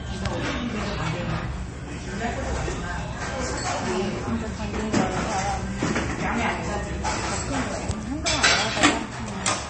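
From start to finish the audio carries plainly audible MP3 compression damage, likely from a low-bitrate encode. Nothing is present above 8.4 kHz, where the encoder has cut the treble to save bits, so the top end sounds dull. The degree of damage points to a rate around 32 kbps. Weak frequency lines drop in and out between frames, giving a watery, swirling texture, metallic chirps on bright content, and smeared transients.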